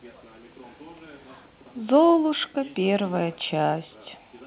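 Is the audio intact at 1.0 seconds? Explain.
Yes, the audio is intact at 1.0 seconds, with no dropout, glitch or distortion at that moment.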